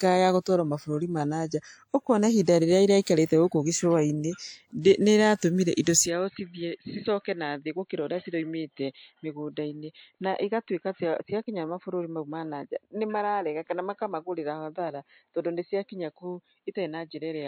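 At 3.02, 4.81 and 5.83 s, a brief hiss precedes sharp attacks, spreading about 50, 39 and 38 ms ahead. This is pre-echo: block-wide quantisation noise leaking before each onset.

From 6.06 s to the end, the sound turns duller with nothing above 4.2 kHz, around 5 dB quieter, with new noise roughly 55 dB down. The likely cause is an input switched to a poorer device.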